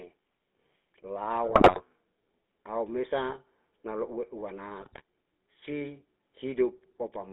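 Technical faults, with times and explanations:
Throughout: GSM full-rate codec. The speech runs through a low-rate vocal-tract model whose excitation is a sparse, regularly spaced pulse train, which fits a 13 kbps full-rate stream. The line passes only about 250 Hz to 3.6 kHz, so the speech sounds thin and boxed in. Because so little of the excitation survives, the voice takes on a plainly audible buzzy, gravelly grain that sits on every voiced sound.
1.46–1.81 s and 4.80–5.03 s: GSM bit errors. In these two stretches corrupted bits reach the decoder, so the stored filter shape, pitch and gain values come out wrong for a run of frames. The wrong values bend the spectrum and throw the level around from frame to frame, so the speech breaks into squawks, pops and gargling. The first burst lasts about 0.35 s and the second about 0.23 s.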